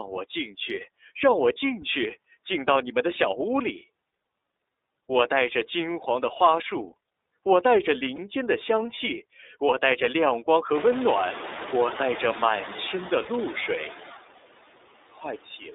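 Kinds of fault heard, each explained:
Noise suppressor artifacts: the background sinks by about 20 dB between phrases and swells back under the voice, because a suppressor is turning down bands it judges steady noise.
iLBC codec: the speech is rough and slightly synthetic and confined to 0.3 to 3.7 kHz, which fits the narrowband iLBC codec in its 30 ms frame mode.
Lost iLBC frames: brief buzzy, held-vowel blips of about 30 ms at 8.15 s and 13.23 s, where the decoder repeated the last pitch cycle over a missing frame.
Speech cut by the noise suppressor: the last half second, from 15.1 s, sounds swallowed and drops by up to about 21 dB, as the suppressor mistakes quiet speech for the room noise that rose around 10.5 s.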